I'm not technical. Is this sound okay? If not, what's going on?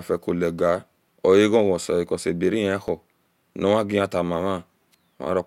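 No. The speech has periodic USB or driver dropouts. About five tiny gaps of silence, each roughly two milliseconds, fall exactly 1.02 s apart between 0.83 s and 4.94 s. Something on the computer briefly blocks the audio each time, causing small regular ticks.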